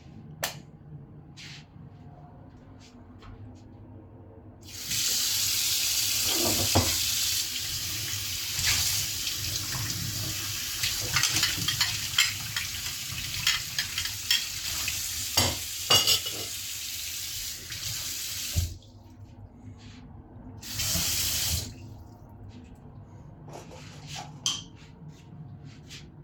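No technical faults can be heard anywhere in the recording, and the signal holds steady and intact from its first moment to its last.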